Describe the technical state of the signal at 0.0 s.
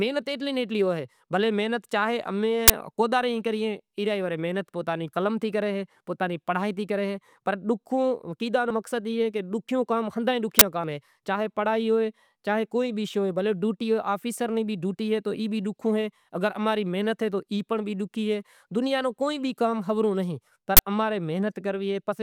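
The signal is intact at 0.0 s, with nothing there to point to a technical fault.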